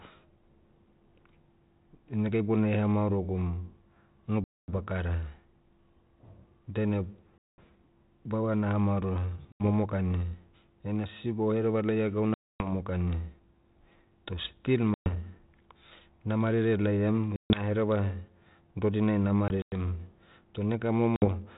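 Packet loss on an ADPCM call hits the speech at 4.44, 7.38, 9.52, 12.34 (after "sisiba ohereva laia gauna"), 14.94, 17.36, 19.48 and 21.16 s. Each gap of 60 to 260 ms drops to hard-edged silence. The decoder's predictor and step size then mismatch the sender's, so the speech, band-limited in a way that fits 32 kbit/s ADPCM, resumes slightly distorted before settling.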